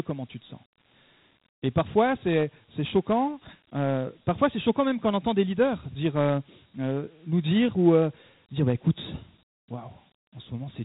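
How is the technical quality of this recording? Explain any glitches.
The technical quality is limited by one fault present from start to finish.

Dialogic VOX ADPCM coding runs throughout: each sample is stored as a 4-bit step relative to a predicted value, which fits a 32 kbps stream at 8 kHz. Nothing remains above 3.9 kHz, and the coarse quantisation leaves a plainly audible gritty hiss trailing the speech.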